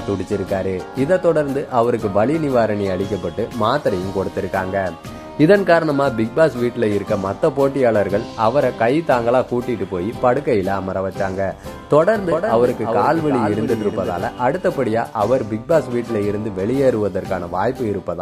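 From 12.32 s to 14.20 s a doubled audio track appears: a second, full-band copy trails about 0.4 s behind, a few decibels quieter, and starts and stops abruptly. It is likely a slower capture path mixed back in. Unlike echo, it has one repeat, no decay and no room colour.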